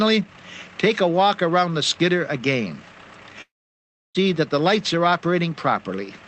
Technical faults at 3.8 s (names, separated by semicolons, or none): long network dropout